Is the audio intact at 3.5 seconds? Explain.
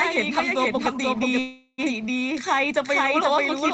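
No, a doubled audio track runs throughout, including at 3.5 s: an equally loud second copy trails by about half a second, likely from a slower capture path recording it twice.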